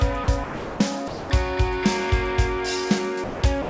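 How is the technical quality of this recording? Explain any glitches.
The recording has five short gaps where the sound drops out and is replaced by steady noise or near silence. They occur at 0.24–0.28 s, 0.44–0.80 s, 1.08–1.30 s, 3.24–3.42 s, and from 3.62 s to the very end. The likely culprit is sound dropped by the voice detector: the sender's detector judged those stretches to be background and stopped transmitting, so the receiver filled in comfort noise until the detector triggered again. The longest gap, 360 ms, is near the start. Everything sits below 8 kHz, which fits a wideband call codec on the path.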